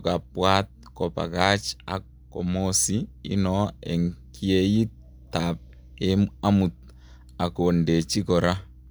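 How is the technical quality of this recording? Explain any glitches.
No technical faults are audible anywhere in the recording.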